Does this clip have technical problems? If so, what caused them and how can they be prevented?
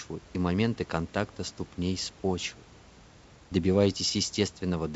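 No, there's nothing wrong here: the speech has come through the call connection as expected, with the top end stopping at about 7 kHz as that codec does and only a low level of room noise well underneath.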